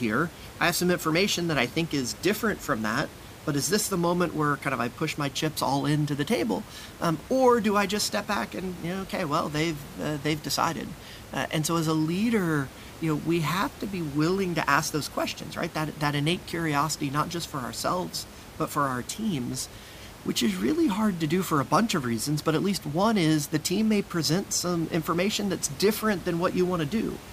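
Nothing stood out on listening to this speech recording, and the room's background noise sits about 18 dB below the speech.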